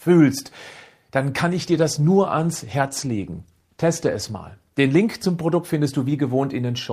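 At 1.48 s the call's bandwidth estimate collapses, and the encoder is ordered down from 64 kbps to 16 kbps. This is a call bitrate drop that lasts through to the end of the clip, with the lowest rate held for about 2.5 s. With a quarter of the bits, Opus codes the speech far more coarsely and trims away the upper frequencies. From that point the voice turns muffled, with a rough, watery texture, and it never regains its earlier clarity.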